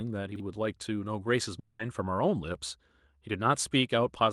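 At 0.32 s the speech briefly garbles: a jumbled flicker lasting until about 0.40 s. This is chunks out of order. A 40 ms block of audio arrived late and was played one block behind where it belonged, after the block meant to follow it. No sound is missing, but the sequence is scrambled, with three hard joins where the blocks are spliced together.

From 1.59 s to 1.81 s the speech gives way to a buzzy, hissy smear that fades rather than dropping to silence, and then the speech resumes with about 200 ms of it gone. This was likely a long network dropout. No audio reached the receiver for that stretch, so it kept extending the last sound it had, filling the whole 200 ms gap with a decaying continuation. The speech then picks up further on, without the portion that never arrived.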